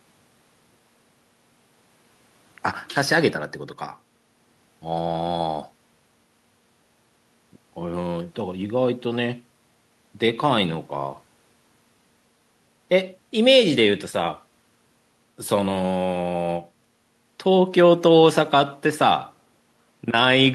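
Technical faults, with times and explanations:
No technical faults are audible in this speech clip.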